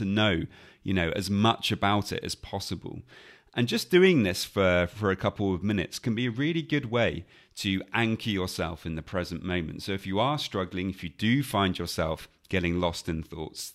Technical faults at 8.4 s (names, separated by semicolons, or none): none